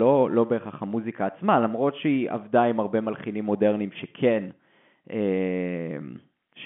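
No technical faults occur anywhere in the speech, which carries the narrow band of ordinary telephone coding.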